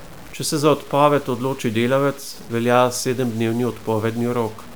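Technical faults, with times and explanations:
Throughout, low bit depth without dither: the speech carries a grainy, rasping distortion that rises and falls with the sound, about 25 dB below the signal. Quiet passages turn gritty, and the faintest moments break up or sputter rather than fading smoothly. This is likely coarse quantisation, consistent with roughly 7-bit samples truncated rather than rounded and with no dither. The error is therefore tied to the waveform instead of spreading as steady hiss.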